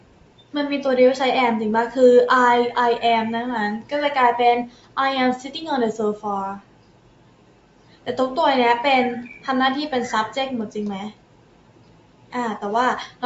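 A noise suppressor applied to music or sounds runs from the start to the end. Built for speech, it treats sustained tones and ambience as noise and pulls them down, so the level swings by around 10 dB and the sound pumps and thins.

Sound cut by the noise suppressor occurs at 0.00–0.54 s, 4.66–4.97 s, 6.59–8.07 s, 11.11–12.34 s and 13.08–13.23 s. Held or fading material sinks by about 12 dB (about 11 dB in the last), and tails are shortened while sharper onsets survive.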